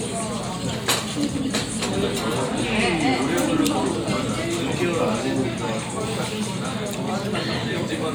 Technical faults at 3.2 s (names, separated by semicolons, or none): none